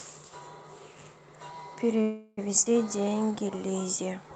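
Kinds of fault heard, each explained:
Call audio freeze: from 2.01 to 2.39 s the sound stalls into a fading buzz with a brief silence, then resumes where it stopped; likely held-up packets emptied the jitter buffer.
Skip ahead: at 2.65 to 2.68 s playback jumps forward almost seamlessly, dropping about a tenth of a second of speech, discarded because later audio was already queued.
Jitter buffer slow-down: from 2.88 to 3.58 s speech drags to 84% speed at unchanged pitch, as the receiver repeated pitch periods, adding 118 ms to rebuild its reserve.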